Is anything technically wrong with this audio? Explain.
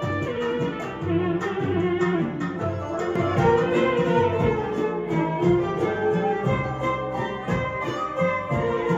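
No, no technical faults detected.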